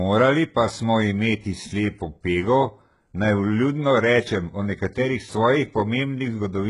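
Throughout the speech, the sound points to HE-AAC compression, likely at a very low rate around 12 kbps. The treble is rebuilt from copied lower bands rather than coded, so s sounds turn gritty and lispy, the damage is heavy, and nothing remains above 11.1 kHz.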